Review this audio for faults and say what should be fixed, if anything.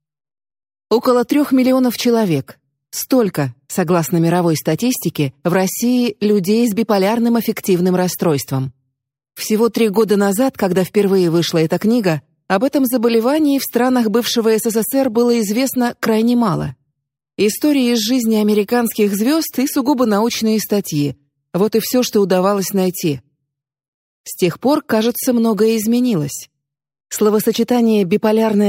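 No faults to fix; nothing in the recording calls for correction.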